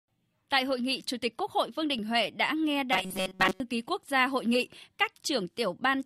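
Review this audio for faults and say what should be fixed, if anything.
Robotic sound from repeated short buffers, 2.93 to 3.60 s: the speech collapses into a rigid metallic buzz at 188 Hz. That pitch fits a fragment of about 5.3 ms being looped over most of that stretch, likely because fresh audio arrived too seldom and the real signal was skipped. To prevent it, give the playback path more buffering headroom and make sure upstream audio is delivered on time.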